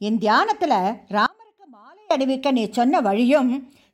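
Speech, with an audio dropout to a faint residue from 1.26 to 2.11 s. For 0.84 s only a faint leak remains, about 30 dB down. The likely cause is a brief signal loss on a still-live path.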